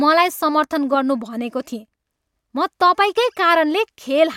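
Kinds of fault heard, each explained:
No technical fault can be heard in this speech recording, and its signal path shows no dropouts, distortion, level problems or other defects.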